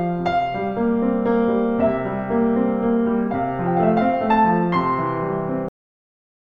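At 5.69 s the final buffers were never written out, so the music stops mid-sound: a cut-off end, dropping to digital silence with no decay.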